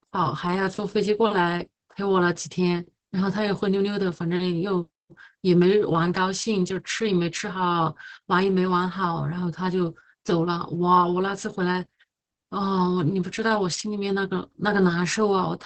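Opus voice compression runs throughout: heavy SILK coding, which fits roughly 10 kbps, caps the band at 8 kHz and coarsens excitation, leaving speech muffled, hoarse and faintly robotic.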